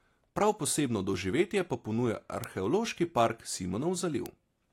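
Bit error spikes at 0.37 s, 2.44 s and 4.26 s: each time a single flipped bit in one sample throws its value off by a power of two before it snaps back, producing a brief broadband tick in the speech that has nothing to do with the surrounding sound.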